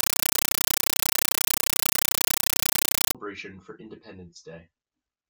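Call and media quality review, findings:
0.00–3.15 s: loud, harsh chattering static replaces the speech. Compressed stream played as audio. Probable component: digital output path over S/PDIF or HDMI. The stream is passed through without decoding, so its data reads as raw samples. Each frame is an 8 ms noise burst, then zero padding, repeating at 31.25 Hz. This fits an undecoded AC-3 stream at roughly 384 kbps. Speech returns after 3.15 s.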